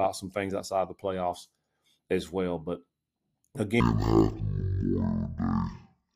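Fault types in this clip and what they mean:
stereo read as mono: Interleaved left and right samples are taken as one sequential channel, so every stereo frame becomes two mono samples. From 3.80 s to the end, the speech drags at half speed, an octave lower, with a faint mirrored copy in the upper spectrum.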